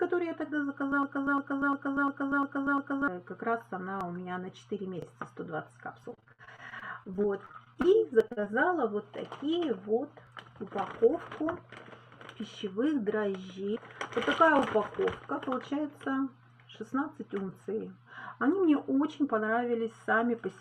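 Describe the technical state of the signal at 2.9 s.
At 2.9 s the signal is inside a broken-record loop running from 1.03 to 3.08 s: a 350 ms fragment repeats six times back to back, likely from a stalled player or stream resending its last buffer. Unlike an echo, each repeat is identical and undecayed, and the audio for that span is lost.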